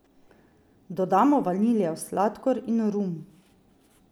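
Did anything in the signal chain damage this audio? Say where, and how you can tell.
No, nothing along the chain has left a mark on this speech that I can hear, so there's no stage to point to.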